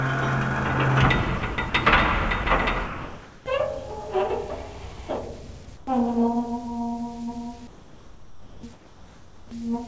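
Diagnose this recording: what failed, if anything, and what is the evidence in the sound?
Low bit depth without dither runs through the whole clip: quiet passages turn grainy, and the grit tracks the sound, sitting around 30 dB below it. The likely cause is a sample-format conversion that truncated to about 8 bits with no dither, so the rounding error follows the waveform.

Sound chopped by the voice detector, 1.38 to 1.74 s: the sound breaks up, with about 120 ms of it swapped for synthetic noise in short pieces. This likely happens at the call-processing stage, where the sender's detector flipped between sending and muting, and the receiver filled the gaps with comfort noise.

Sound dropped by the voice detector at 2.44 s, 2.86 to 3.46 s, and 5.65 s: the sound gives way to steady noise. The longest drop lasts 600 ms and loses about 280 ms of real sound, while the brief ones last 20 ms. 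The detector likely judged quiet sound to be background and stopped transmitting.

Comfort noise in place of the background, 5.65 to 5.87 s and 7.67 to 9.51 s: the real ambience is replaced by flat, featureless hiss, for 120 ms and then 1.74 s. During these pauses the sender likely transmitted nothing, and the receiver generated noise shaped to roughly match the background. The call path's G.722 coding is audible as a hard limit, with nothing above 8 kHz.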